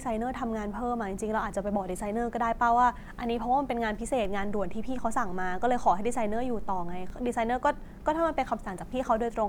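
At 4.25 s the signal path shifts the waveform's zero line by a fixed offset of about -32 dBFS. That is a DC step. The offset holds until 7.10 s, when the baseline returns to zero. Because a sudden jump in DC level has energy well below and into the audible range, each edge comes through as a short low thump, one at 4.25 s and one at 7.10 s, while the speech continues unchanged across both.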